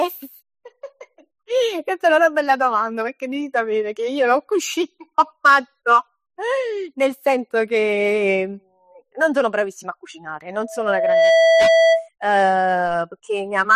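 At 10.62 s a loudspeaker feedback squeal begins: a single tone near 657 Hz swells over roughly three-quarters of a second, ending at 12.09 s a few decibels above the speech. The microphone-loudspeaker loop exceeded unity gain there. Unlike steady hum, it grows by itself.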